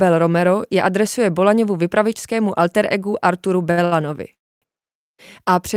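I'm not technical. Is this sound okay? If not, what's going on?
No. There are two kinds of fault in this speech, both near the end.

Short stall from a late packet, at 3.71 to 3.79 s and again at 3.85 to 3.94 s. Each time, a piece of the call's audio data arrived late, so the receiving end had nothing new to play. It held the last sound for about 60 ms until the data turned up, then continued from the same spot. You hear a brief drawn-out sound with a slight buzz or dip. Nothing is lost.

Call audio freeze, at 4.34 to 4.64 s. The sound stops for about 0.3 s. A short tail of the last sound fades out, and the rest of the gap is silence. The audio then picks up exactly where it stopped, so nothing is skipped. The likely cause is that the audio data was held up on its way across the network, leaving the receiver with nothing to play for that time.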